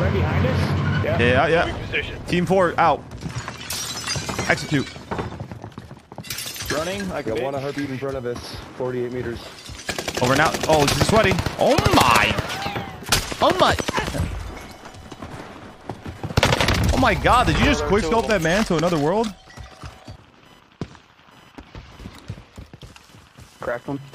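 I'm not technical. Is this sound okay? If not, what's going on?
No. Computer activity noise runs throughout: a faint, high buzz, pulsing roughly a thousand times a second, leaking in from the computer's busy electronics.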